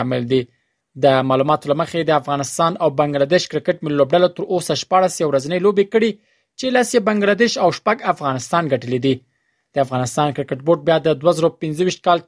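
Nothing is technically wrong with this audio, so there are no fault times or causes to give.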